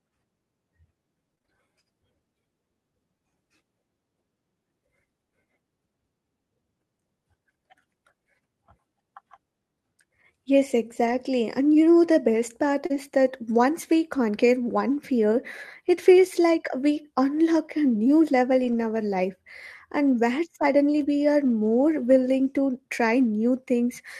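Between 1.35 and 1.50 s the speech turns choppy and robotic, with small pieces missing. This is repeated packet loss. Four separate holes, the longest 20 ms and 80 ms in total, arrived within a fraction of a second. The decoder bridged each one by extending the sound just before it, so nearly half of that stretch is patched-in audio rather than real signal.

From 11.06 to 11.16 s the speech becomes briefly grainy and noisier, though nothing drops out. This is a lost packet rebuilt from error correction. The missing audio, about 60 ms, which fits three 20 ms packets, was recovered from the coarse backup copy that Opus carries inside the following packet, so the replacement is rougher than the original.

Just after "best part", from 12.86 to 12.92 s, comes a short smear, a quick wobble where the sound loses definition. This is short concealed packet loss. About 40 ms never reached the decoder in time, and it filled the hole by continuing the preceding sound before blending back. 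Overlapping it, from 12.90 to 12.96 s, another 40 ms is again rebuilt from error correction and sounds coarse.

The same rough, noisy patches, each with no gap, come back at 16.92–16.98 s just before "unlock a", at 18.64–18.74 s and at 21.0–21.04 s. They last about 40, 60 and 40 ms, and each is rebuilt from the low-bitrate backup copy.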